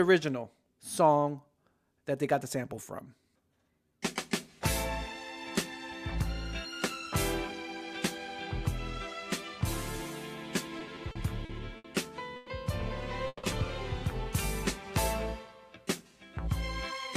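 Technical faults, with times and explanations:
10.79–11.86 s, repeated stalls (stutter): seven short stalls, the longest 70 ms, fill about 190 ms (18% of the span) with the previous sound repeated, so the audio drags and stutters with nothing lost. Late packets kept emptying the jitter buffer. On a spectrogram, brief frozen, smeared stretches interrupt the changing detail.
12.36 s and 13.27 s, call audio freeze: the sound hangs as a fading buzz for 110 ms and then 160 ms, the second decaying to 30 ms of silence, then resumes where it stopped. The likely cause is held-up packets draining the jitter buffer. The waveform shows a decaying plateau followed by a clean restart.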